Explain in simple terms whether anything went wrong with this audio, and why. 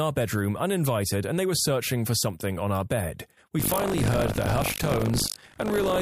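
Buffer tearing starts at 3.58 s and lasts to the end of the clip, heard as a robotic buzz at 50 Hz over the speech. The program filling the playback buffer and the hardware reading it have drifted out of step, so in every 20 ms chunk about a fifth of the audio is a stale piece from roughly 70 ms earlier. The abrupt joins on either side of each stale piece, repeating fifty times a second, create that rattling buzz.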